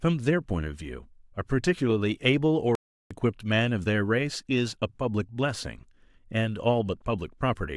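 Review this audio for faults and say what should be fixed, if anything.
At 2.75 s the speech cuts to dead silence mid-flow and resumes at 3.11 s, a gap of about 0.36 s. This playback stall is likely the player running out of buffered data or its audio thread being blocked. A larger playback buffer and a real-time audio thread kept free of blocking work should prevent it.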